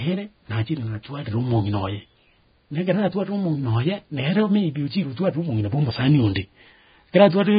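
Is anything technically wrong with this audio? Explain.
Yes. All the way through, this speech sounds hissy and grainy, with nothing above about 4.9 kHz, likely from heavy Vorbis compression at a very low bitrate, around 16 kbps. The encoder chops the treble and quantises what's left so coarsely that fine detail turns to noise, roughening tones and smearing attacks.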